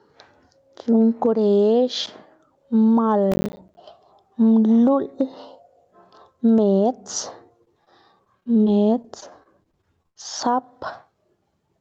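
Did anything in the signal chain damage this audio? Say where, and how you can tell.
Yes. Gain pumping runs through the whole clip, with a swing of about 10 dB. Loud and soft parts end up closer in level, squashing the dynamics. The likely cause is input gain set far too high, with a fast limiter or compressor in the capture or call processing clawing it back on every peak.

Processor overload crackle appears from 3.32 to 3.77 s at the driver or buffer stage. A run of missed deadlines, each dropping what sounds like a buffer of around 10 ms to silence, chains into a gritty, tearing crackle that stops once the load clears.

Lost packets rebuilt from error correction occur at 7.23 s and 7.29 s, each covering 20 ms. The Opus decoder played the low-bitrate copy carried in the following packet, so there is no hole, just two brief patches of rougher, noisier coding.

Short concealed packet loss, a network-stage fault, occurs at 7.64 to 7.68 s and 7.84 to 7.88 s, each about 20 ms missing. 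The receiver extended the preceding sound to bridge the gap, then crossfaded back, leaving a small smear or wobble at each point.

Repeated packet loss (robotic sound) runs from 8.24 to 10.40 s. Twelve separate gaps, the longest 92 ms, are each patched by continuing the last sound, about 13% of that stretch in all. The rapid succession gives a choppy, robotic texture with pieces dropped out.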